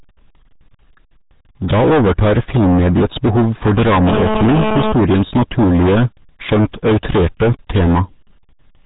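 From start to finish the speech is driven about 21 dB past what one stage can pass, so hard clipping cuts its peaks flat on roughly a third of the samples. The squared-off waveform throws harmonics high up the spectrum, giving a harsh, constant fuzz on every loud syllable.

Also throughout, the audio has been squeezed through the RealAudio 14.4 codec at 8 kbit/s, a speech coder built for dial-up links. It discards everything above 3.8 kHz and models the rest crudely, so the speech sounds muffled and gargly, with heavy codec damage.

From 4.08 to 4.92 s, just after "overtar filmmediets behov for", GSM phone buzz breaks in. A nearby handset on a call transmits in bursts about 217 times a second, and the audio circuitry rectifies those radio pulses into a hard, raspy buzz at 217 Hz, rich in harmonics. It holds steady at about 3 dB below the speech and is unrelated to it.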